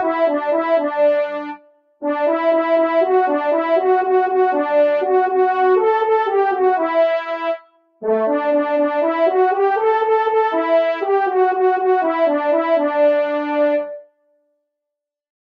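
Throughout, the sound pumps and thins, swaying by around 5 dB as attacks pass but held tones and tails sink: a noise suppressor applied to music or sounds, mistaking steady content for noise.

From 1.41 to 2.03 s, 7.59 to 8.03 s and 14.02 to 14.56 s, the sound drops away, by about 19 dB at its deepest: sound cut by the noise suppressor, which judged these passages to be noise.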